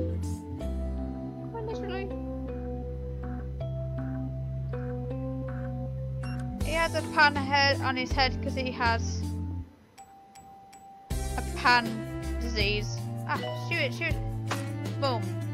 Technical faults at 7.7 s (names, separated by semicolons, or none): USB whine